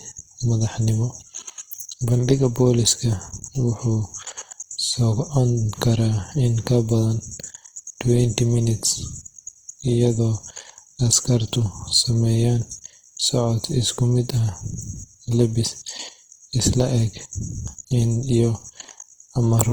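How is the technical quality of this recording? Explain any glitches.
Technical quality is limited by plainly audible compression across the whole clip. Throughout, the speech sounds grainy and rough, likely from Opus compression in CELT mode at a rate that fits about 16 kbps: starved bands are filled with noise, so a spectrogram shows smeared, speckled texture up to about 20.4 kHz instead of clean harmonics.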